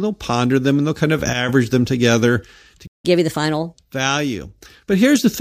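A playback stall runs from 2.87 to 3.05 s. The speech stops dead in mid-flow and the output stays silent for about 172 ms, a gap long enough to register as a hiccup rather than a natural pause. Then the speech resumes. The likely cause is that the player's buffer ran dry, or its playback thread was held up, so nothing reached the output until data flowed again.

Catch-up at higher speed follows straight after, from 3.05 to 3.74 s. The player works through the backlog built up during the stall by resampling it at 1.25 times normal speed. Because resampling changes speed and pitch together, the speech in this stretch sounds hurried and lifted by about four semitones. At 3.74 s the lost time is recovered and both speed and pitch snap back to normal.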